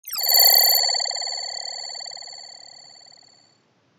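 At 0.8 s the character of the sound changes abruptly and stays changed to the end. From that point nothing is present above 7.6 kHz, so the sound turns duller, with a faint new noise floor sitting far below the signal. There is no gap at the transition and no obvious jump in level. The likely cause is the input switching to a poorer device with a narrower passband.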